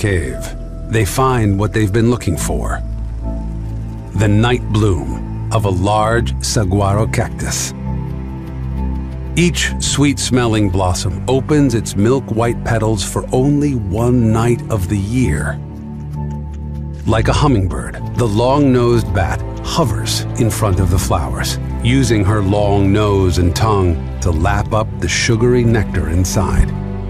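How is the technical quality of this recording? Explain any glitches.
One fault stands out. Channel delay (comb filtering) runs from 16.87 to 18.24 s. One channel arrives roughly a single sample late, a matter of hundredths of a millisecond, and when the two channels are summed to mono, content common to both cancels at regularly spaced frequencies. With so tiny an offset, the first notch falls high, around 20 kHz, so the effect is a slight dulling and loss of air at the top of the sound for that stretch.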